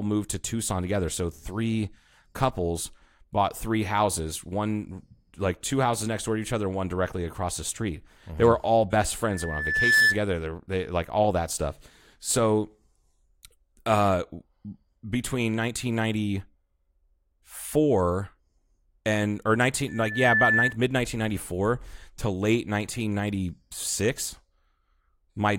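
A single 1.8 kHz tone swells over most of a second into a loud squeal from 9.23 to 10.21 s, after "were all best", and again, somewhat quieter and quicker to build, from 19.88 to 20.77 s, after "and or". This is loudspeaker feedback squeal: the microphone picked up its own loudspeaker, and at 1.8 kHz the loop gain exceeded one.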